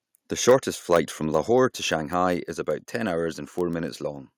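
Block size mismatch (padded) runs through the whole speech clip: a steady buzz at 46.9 Hz sits under everything, and the audio plays about 0.1% slow at essentially normal pitch. One stage hands over blocks slightly shorter than the next stage reads, and the shortfall in each block is filled with silence, so a tiny gap recurs at the block rate. The buzz frequency fits a 1024-sample read buffer, and the stretch is too small to hear as a change in tempo. Microphone overload appears at 0.48–0.55 s, 0.92–0.97 s and 1.35–1.38 s as a harsh, crackling edge on the loudest syllables. The peaks exceed the converter's ceiling by about 4 dB, about 4 dB and about 1 dB respectively, and their tops are flattened. Roughly a tenth of the samples are clipped in the first burst, a few percent in the second, and only a small fraction in the third. Microphone volume stepped down is heard as sudden drops in the level of both voice and background at 0.50 s (about 2 dB), 1.50 s (about 3 dB) and 2.52 s (about 3 dB), the last just before "about ten hours". 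The drops are likely the call software reacting to the clipped peaks by cutting the device's input gain in single steps, and the first comes right in the middle of the worst distortion.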